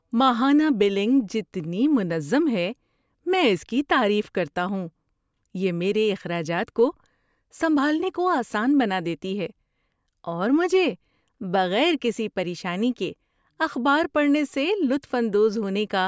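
Nothing stood out on listening to this speech recording.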